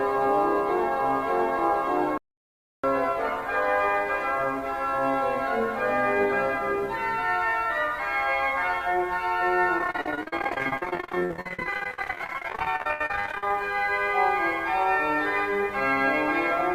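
At 2.18 s the audio stops in mid-flow and stays silent for about 0.66 s before resuming at 2.84 s. This is a playback stall, likely caused by the player running out of buffered data or its output thread being blocked until it recovered.

From 9.78 s to 13.51 s the sound turns choppy and robotic, broken by dozens of brief holes, the longest about 70 ms. This is repeated packet loss. Lost or late packets were patched by extending the preceding sound, so about half of this stretch is concealment.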